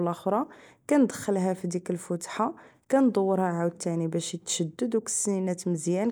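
The speech recording carries no audible technical fault at any point in the signal.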